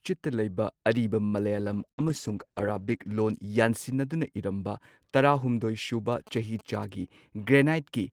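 At 1.27 s, right after "ꯂꯩꯕ ꯑꯔꯤꯕ", a sound is held a little too long, with a faint buzzy smear, until 1.35 s. This is a short stall from a late packet. The next packet was not there in time, so the jitter buffer ran dry and the receiver stretched the last bit of speech by about 48 ms. When the packet arrived, playback resumed from the same point. Nothing is lost, but everything after it now plays roughly 48 ms later.

From 1.62 s, also after "ꯂꯩꯕ ꯑꯔꯤꯕ", the voice turns coarse and muffled, with a watery edge. It stays that way until 3.30 s. This is a call bitrate drop. The bandwidth estimate fell, and the encoder went from 32 kbps down to 14 kbps and stayed at the low rate for about 1.6 s. At that rate the coding is cruder and the high frequencies are trimmed away, which dulls and roughens the speech until the rate recovers.

Inside that degraded stretch, from 1.92 s to 2.01 s, the last sound is briefly held and fades, and then speech jumps ahead. 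This is a burst of packet loss. Several consecutive packets never arrived in time. The receiver bridged about 56 ms by extending and fading the last sound, while around 60 ms of the actual speech is gone, so the resumption skips past it.

From 6.12 s to 6.85 s a galloping dit-dit-dit of short buzzes runs under the speech, at about 20 dB below it. These are GSM signalling bursts from a nearby 2G phone exchanging control traffic with the network. The audio circuitry rectifies the radio pulses, and their repetition at about 217 Hz produces that characteristic buzzing gallop.

From 6.99 s to 7.65 s the speech sounds slightly rushed, about 7% faster, with the pitch unchanged. This is a jitter buffer speed-up. The buffer had built up more delay than its target, so the receiver repeatedly cut out tiny pitch-period slices, around 50 ms in total, to catch up. It shortens the audio without shifting the voice's pitch.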